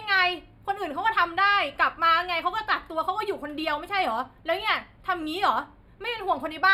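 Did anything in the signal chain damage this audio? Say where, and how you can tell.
Yes. Channel delay (comb filtering) runs through the whole speech clip, from the stereo-to-mono summing stage. One channel lags the other by about four samples, well under a tenth of a millisecond. When the two are folded down, the shared signal cancels around 7 kHz, which dulls the sibilance and gives a hollow top. The notch stays fixed and energy returns above it, unlike a low-pass roll-off or codec band-limiting, and it does not sweep like flanging.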